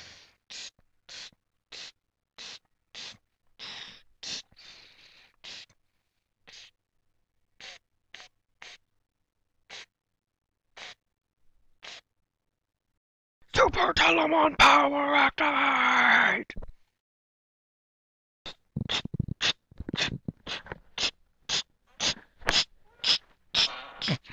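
At 14.08 s a single low thump sounds while the audio carries on unchanged. This is a DC step: the waveform's zero line jumps by about -41 dBFS, and the offset then decays away as a 5 Hz high-pass filter gradually pulls it back toward zero.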